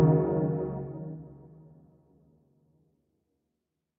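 Right through the clip there's a speech-style noise suppressor applied to music or sounds. It reads sustained parts and tails as noise and pulls them down by around 10 dB while onsets slip past, so the audio pumps and thins, with everything above 8 kHz already gone through the call path.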